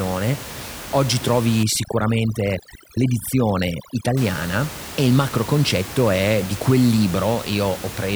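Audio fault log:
1.63–4.17 s, overdone noise removal: a noise reducer set far too strong pulls every frequency band down or out whenever it sits near its noise estimate, so the room noise, about 14 dB below the speech elsewhere, drops and breaks up into twinkling specks, and quieter parts of the speech vanish with it. A spectrogram shows the noise floor blanked out, isolated flickering dots, and ragged, holed speech harmonics.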